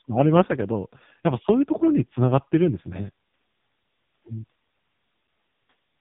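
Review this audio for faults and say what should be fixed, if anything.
The whole clip runs through an AMR narrowband mobile codec, and a low-rate mode at that, which fits roughly 5.15 kbps. Nothing gets past about 3.8 kHz, and the speech comes out buzzy and synthetic because so few pulses drive the vocal-tract model. Capture over a wideband or direct path instead of a narrowband phone link.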